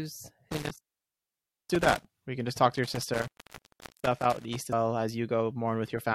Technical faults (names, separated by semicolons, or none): intermittent contact; damaged data in a compressed stream